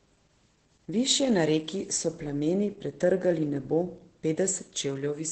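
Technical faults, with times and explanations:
Throughout: Opus voice compression. The speech has no content above about 8.7 kHz, which points to the wideband SILK mode. The narrowed band and coarsely coded excitation make it sound plainly muffled, hoarse and slightly robotic, consistent with a bitrate around 12 kbps.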